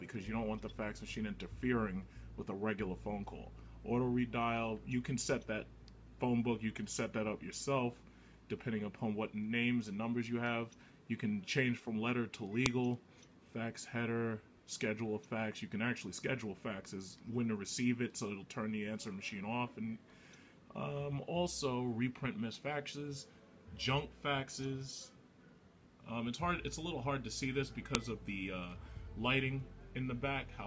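At 12.66 s and again at 27.95 s a sharp, loud snap cuts in: a file header played as audio. The header bytes of separately joined pieces are read as samples. Unlike a plain splice click, it is abrupt and loud regardless of the surrounding level.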